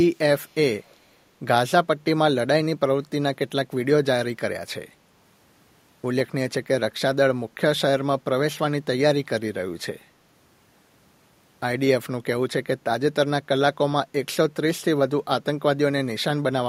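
Speech with two brief bursts of echo leak, at 0.47–0.55 s and 0.82–0.96 s: a very faint copy of the voice returning 229 ms late, likely residual echo from a far-end loudspeaker slipping past its echo canceller. Unlike room reverberation, it comes back as a distinct repeat at a fixed delay rather than a smooth decaying tail.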